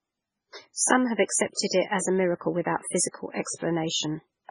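Heavy MP3 compression runs the whole way through: nothing above 10.5 kHz, watery swirling detail and smeared attacks, likely from a very low bitrate around 16 kbps.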